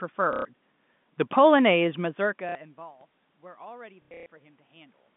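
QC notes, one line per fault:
0.33 to 0.45 s, packet loss with last packet repeated: About 120 ms of audio is missing. The last good packet plays again until fresh audio arrives. The repeats fit 30 ms packets.
2.49 to 2.55 s, packet loss with last packet repeated: A shorter 60 ms gap is filled the same way.
4.02 to 4.26 s, packet loss with last packet repeated: About 210 ms is lost in patches across 240 ms, the longest run being 120 ms. Longer runs buzz near 33 Hz and sound robotic.
1.33 s, DC step: The waveform's zero line jumps suddenly. The offset then dies away through a 20 Hz high-pass, within a few tens of milliseconds. It is heard as a low thump under the speech.
3.01 s, DC step: A second jump gives the same brief thump, and the speech carries on unchanged.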